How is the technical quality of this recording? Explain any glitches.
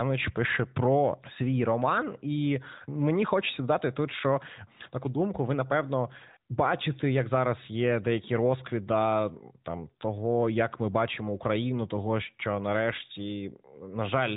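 No glitches can be heard anywhere in the recording. The speech comes through an AMR narrowband mobile codec path, with nothing above 3.8 kHz and only light coding texture, which fits the 12.2 kbps mode.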